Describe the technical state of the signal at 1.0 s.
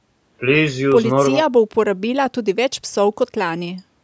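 At 1.0 s the speech is intact, with no dropout, distortion or other fault, only the ordinary band limit of call microphone processing, which leaves nothing above 8 kHz and trims the lowest bass.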